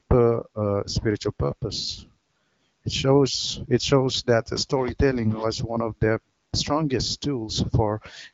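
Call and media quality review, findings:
No faults found; AMR-WB wideband path at 15.85 kbit/s.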